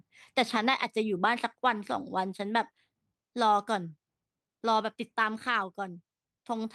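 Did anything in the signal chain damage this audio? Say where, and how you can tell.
No, nothing along the chain seems to have touched this speech recording, and there's no point where it catches or gives way.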